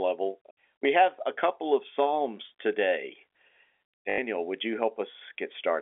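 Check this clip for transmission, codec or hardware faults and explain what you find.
One transmission fault stands out, a short packet loss with the last packet repeated, heard against the band-limited G.711 telephone sound of the line. From 4.1 to 4.18 s, just before "would you", about 80 ms of audio goes missing, which fits four 20 ms packets. The receiver kept replaying the last good packet, so the gap becomes a brief robotic stutter with a 50 Hz buzz. A zero-filled dropout would leave silence instead, and smoother concealment would fade rather than buzz.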